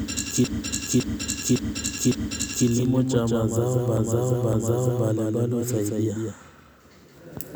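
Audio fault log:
throughout, doubled audio track: a second full-band copy of the speech trails the original by roughly 200 ms at about 5 dB lower, with no decay or room colour, so every syllable gets a slap-back. This is likely a second capture path or misaligned edit.
0.44–2.67 s and 3.97–5.09 s, repeated frames: a 557 ms block replays four extra times, then twice, heard as stutters. The block size fits a run of six compressed frames. The repeats add 2.23 s and 1.11 s.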